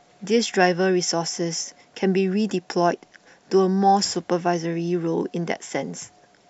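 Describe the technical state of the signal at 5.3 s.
At 5.3 s the speech signal is intact, with no fault present at that moment.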